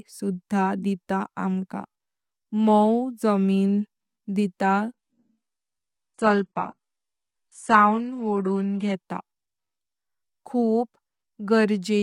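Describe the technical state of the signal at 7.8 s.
At 7.8 s the speech is inside an adaptive stream at a lower bitrate, a stretch running from 4.94 to 8.94 s. The player switched to a much leaner version of the stream, which fits a very low-bitrate HE-AAC rendition. Nothing remains above 11.1 kHz, and codec artefacts thicken. What separates this from a dropout or a plain low-pass filter is the abrupt, gapless change of quality at both boundaries, with the fuller sound returning at 8.94 s.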